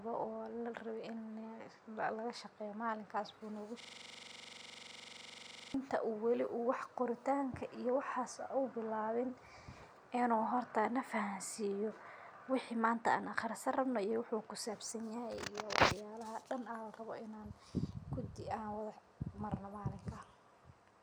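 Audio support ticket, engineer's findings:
System hang loop, 3.80–5.74 s. Speech freezes into one 42.67 ms fragment repeating at 23.4 Hz, a machine-gun stutter. Driver or host stalled while hardware kept cycling its ring buffer, fits a 2048-sample buffer. Waveform: identical periodic blocks; spectrogram: vertical stripes at loop rate.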